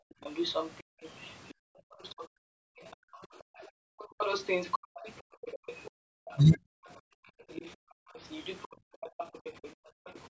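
From 0.00 to 0.21 s, the background is gated by the echo canceller. While the loudspeaker is active, the canceller pulls the microphone down by about 40 dB. The room tone drops out for around a fifth of a second, then returns when the suppression releases. The same gating recurs across 0.83–3.98 s and 4.79–8.16 s, with about two seconds of dips inside each span, and again as shorter drops of roughly a third of a second at 8.76–9.02 s and 9.74–10.06 s.

From 0.23 to 6.58 s, a second voice sits under the main speech at about 15 dB down. It is probably the other side's voice leaking through: the far end plays on the device's loudspeaker, the microphone picks it up, and the echo canceller does not fully remove it. The leak returns from 7.49 to 10.20 s, fainter at about 25 dB below the speech.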